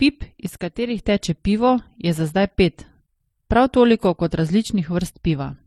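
From the very start the speech carries a layered, smeared quality, with swirly, watery artefacts on top of a duller, grainy texture, and nothing above about 18.4 kHz. That mix is the signature of transcoding between lossy codecs, most likely an MP3 stage at something like 37 kbit/s followed by HE-AAC at around 40 kbit/s. The second encoder wastes its small budget re-encoding the first one's damage and adds its own artefacts, so you hear both sets at once for the whole clip.

Then from 0.46 to 1.04 s the level suddenly sags by about 6 dB and snaps back. Otherwise the sound is unchanged. That's one channel dropping out, likely a stereo channel briefly lost before the mono sum, so everything common to both sides falls by half in amplitude for that stretch.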